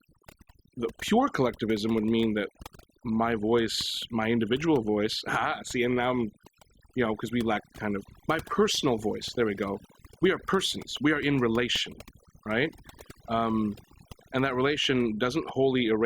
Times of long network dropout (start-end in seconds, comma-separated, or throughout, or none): none